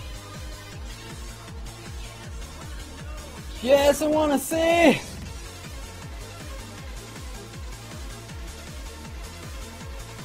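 From 0 to 6.0 s the adaptive stream starts at a low bitrate, likely near 16 kbit/s Opus: dull, thin treble, stronger artefacts, then a sudden gapless step up.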